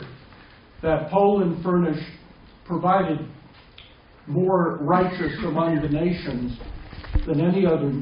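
Nothing in the audio stands out as a technical fault, so there's nothing here to flag at any point.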